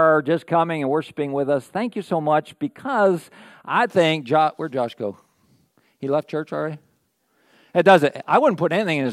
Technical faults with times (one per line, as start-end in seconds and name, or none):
0.00-3.87 channel delay (comb filtering)